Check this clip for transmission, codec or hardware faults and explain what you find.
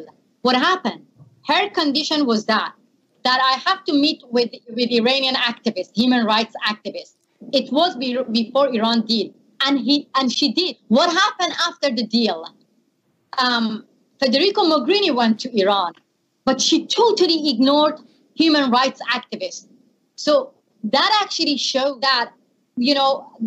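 I found no faults in this clip.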